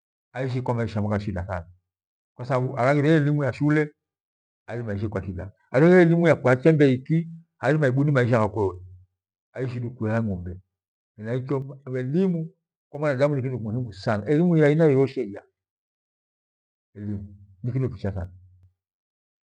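The speech level drops abruptly by about 6 dB from 11.62 to 12.95 s, before "mwanadamu ni kitu muhimu". It drops again from 15.12 to 15.76 s, after "sana elimu ya aina", and from 18.25 to 18.63 s. This is likely one channel dropping out ahead of the mono sum.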